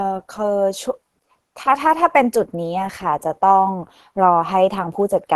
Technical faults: Opus compression

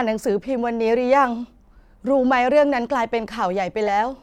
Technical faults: corrupt frame decoded

